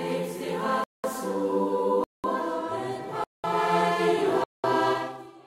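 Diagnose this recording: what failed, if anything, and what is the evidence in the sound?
A gap between chunks breaks up the music at the playback or streaming stage. Silent holes of 200 ms fall at 0.84–1.04 s, 2.04–2.24 s, 3.24–3.44 s and 4.44–4.64 s, with 1.0 s of audio between them. Each time, the player or decoder leaves dead time before starting the next chunk. On a spectrogram these show as clean vertical blank bands across all frequencies. On the waveform, the signal drops to silence and resumes with hard edges.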